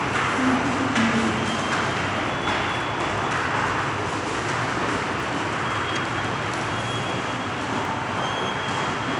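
Dropped samples, at 5.2 s and again at 7.85 s: each is a single sharp click, a brief tick laid over the sound with a thin vertical streak through the whole spectrum. The likely cause is a tiny gap in the sample stream, a fraction of a millisecond each time, so the waveform leaps straight from one value to a later one. That step produces the click, but the gap is far too short to remove anything audible from the material itself.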